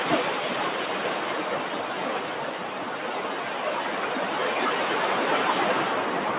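No technical faults occur anywhere in these everyday sounds, which come through a telephone-style call path with nothing above 4 kHz.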